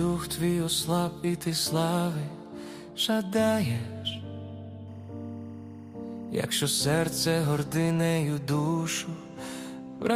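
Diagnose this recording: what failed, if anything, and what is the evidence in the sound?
Timecode bleed from 4.88 to 8.16 s, in the analogue wiring. A faint chirping warble, roughly 35 dB below the sound, flips between tones near 1 and 2 kHz: linear timecode at 24 frames per second leaking in from a neighbouring track or cable.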